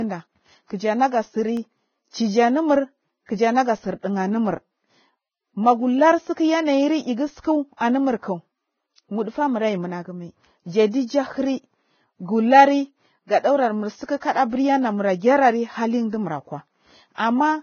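The whole clip sounds hissy and grainy with nothing above 6.6 kHz, likely from Vorbis compression at a very low bitrate around 16 kbps, leaving the treble coarsely quantised into noise.

From 1.37 to 1.98 s, just before "chijinurmur kija naga tsir", come four CD scratch ticks, tiny clicks with the longest about 1.5 ms, where damaged samples were patched over.

Pre-echo then turns up at 7.77, 14.05 and 17.15 s, where the codec spreads noise into the quiet moment before a sharp attack, giving a short hiss about 34 to 39 ms ahead of it.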